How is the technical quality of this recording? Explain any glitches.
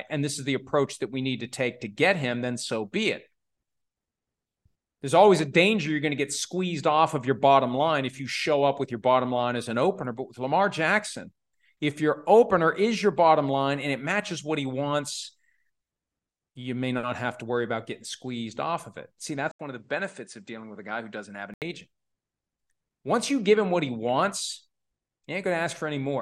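One glitch affects the recording. From 19.51 to 21.62 s, after an 80 ms gap, the speech turns duller and about 5 dB quieter, with nothing above 9.8 kHz and a new noise floor roughly 50 dB down, likely from an input switched to a poorer device. A spectrogram shows the top band abruptly cut off, and the waveform shows a brief flat gap followed by a lower envelope.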